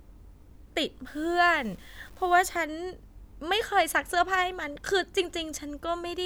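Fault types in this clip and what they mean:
Low bit depth without dither: From 1.06 to 2.56 s the speech turns grainy, with a rough distortion that tracks the voice, roughly 30 dB below it. The likely cause is truncation to about 8 bits with no dither.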